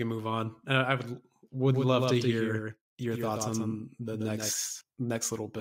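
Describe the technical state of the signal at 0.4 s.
No technical fault is audible at 0.4 s, and the signal is intact at that point.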